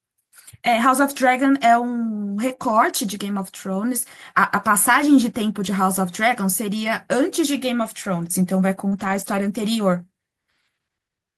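A speech recording with two packet-loss faults packed close together. First, at 8.88 to 8.94 s there's a short concealed packet loss: about 40 ms never arrived, and the decoder papered over roughly 36 ms of it by extending the preceding sound, so you get a quick smear before the real audio blends back in. Right behind it, from 8.92 to 9.66 s, comes a run of lost packets rebuilt from error correction. Separate packets kept dropping, and the decoder played the low-bitrate backup copies carried in the following packets, adding up to 380 ms of patched audio. That fits around nineteen separate lost packets. There's no gap, but those stretches come out rougher and noisier than the surrounding speech.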